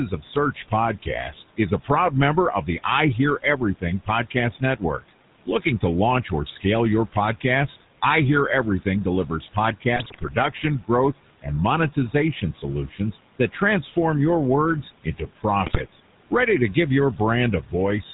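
Speech with room noise about 19 dB below the voice runs through two faults for the whole clip. GSM full-rate codec coloring gives a plainly audible buzzy, gravelly roughness and nothing above 4 kHz, consistent with a 13 kbps pulse-excited vocal-tract model. Noise suppressor artifacts push the background down by about 18 dB between phrases, letting it swell back under speech. Speech cut by the noise suppressor appears from 0.18 to 2.86 s and from 15.04 to 17.73 s, starting after "your words" in the second span. Each time, roughly 0.4 s of soft consonants, word endings or a quiet phrase is misjudged as noise and dropped by up to about 14 dB, so they sound swallowed. GSM bit errors hit from 9.96 to 10.34 s and from 15.66 to 15.81 s, where corrupted filter, pitch and gain values turn the voice into squawks, pops and gargling.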